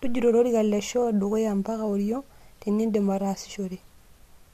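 No technical faults can be heard anywhere in the speech recording.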